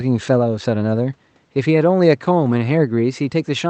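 Nothing goes wrong here: the faint room noise sits about 43 dB below the speech, and the top end stops around 8 kHz simply because that's how the call codec carries it.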